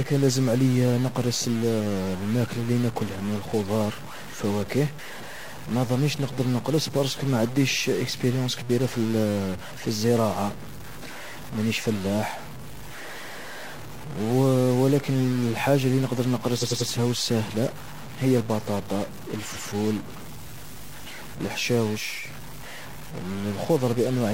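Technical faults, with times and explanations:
Throughout, stuck bit: distortion rides on the speech, and the pauses are filled with noise instead of silence. This is likely a single data bit held at a fixed value, so about half the samples are offset by that bit's weight in a waveform-dependent pattern.
16.58 to 16.86 s, repeated frames: just after "الحاجة اللي نقدر" a block of about 93 ms, which fits two compressed frames, plays three extra times, giving a stutter before "و الساهلة هي البطاطا". The duplication adds about 279 ms.
19.51 to 19.66 s, repeated frames: shortly after "و الساهلة هي البطاطا" a block of about 139 ms, consistent with three frames, is played once more. The sound jumps back and repeats, adding about 139 ms.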